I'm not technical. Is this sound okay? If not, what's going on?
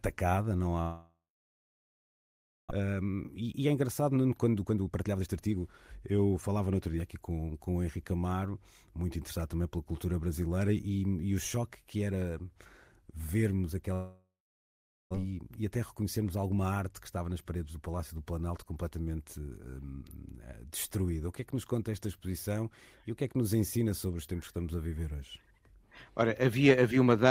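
No, there are two kinds of problem, each happening twice.

The first is a long network dropout. From 0.81 to 2.73 s, and again from 13.94 to 15.17 s, the speech breaks off. A short fading buzz carries on, then there is silence, about 1.5 s the first time and 0.8 s the second. About a second of speech is missing each time. A network interruption is the likely cause.

The second is a jitter buffer speed-up. After each gap, the player had built up extra waiting audio and trimmed tiny slices to catch up. From 2.80 to 6.57 s the speech runs about 23% fast, losing roughly a second, until "no outro dia aqui". From 15.24 to 17.25 s it runs about 8% fast, losing roughly a fifth of a second, until "nas paredes do". The pitch stays normal, but the speech sounds hurried.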